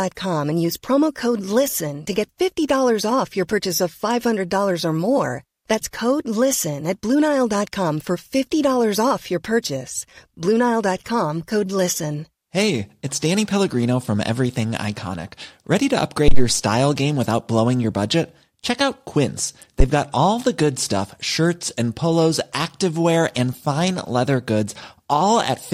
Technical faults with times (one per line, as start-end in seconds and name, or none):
16.28-16.50 phantom power thump
19.80-19.86 phantom power thump